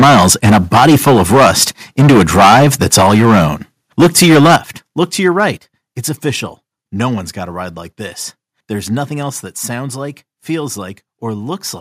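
The speech in this clip has a harsh, crackling edge on its loudest syllables from 0 to 1.64 s, 1.99 to 3.47 s and 4.0 to 4.56 s, with a much milder touch at 5.25 to 5.44 s. This is likely microphone overload. Peaks drive about 11 to 14 dB past the converter's limit, so a large share of samples are flattened, while the last stretch goes only about 1 dB over. The level also drops abruptly, voice and background together, at 3.02, 4.56, 5.58 and 9.3 s, by about 2, 8, 6 and 2 dB. These steps point to the microphone volume being stepped down by the call software.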